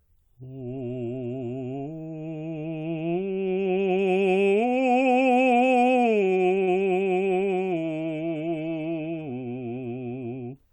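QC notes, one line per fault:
5.57–6.79 s, repeated stalls (stutter): the music drags and hiccups through seven brief stalls, the longest about 37 ms, each holding the last sound briefly. Late packets kept emptying the jitter buffer, so the receiver stretched audio to cover roughly a ninth of this span, with nothing lost.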